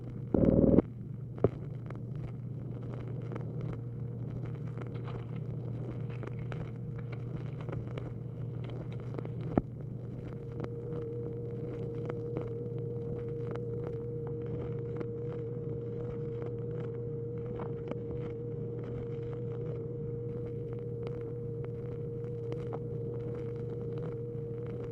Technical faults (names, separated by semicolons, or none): adaptive stream at a lower bitrate